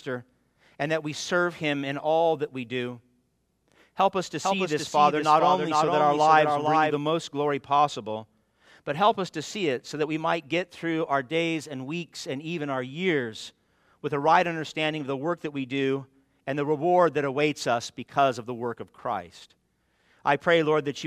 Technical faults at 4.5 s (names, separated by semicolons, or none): doubled audio track